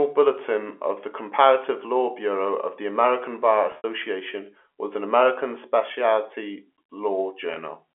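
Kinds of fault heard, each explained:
Packet loss with pitch repetition: stretches of audio never arrived, and the receiver bridged each gap by looping the last pitch period. The result is a brief buzzy, frozen hold rather than a silent hole, which is what a plain dropout would leave. From 3.72 to 3.84 s, about 100 ms is lost in scattered bursts, and the longest 70 ms run starts to fade. At 7.54 to 7.56 s, a 20 ms loss gives only a short held buzz.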